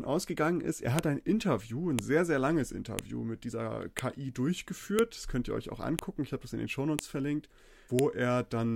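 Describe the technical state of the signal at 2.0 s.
At 1.99 s, just before the 2.0 s mark, a file header played as audio produces a sharp, loud click in the speech. A new piece of audio was joined on with its header left in, so those bytes play out as samples and make a brief snap. Its timing suggests the pieces are about one second long.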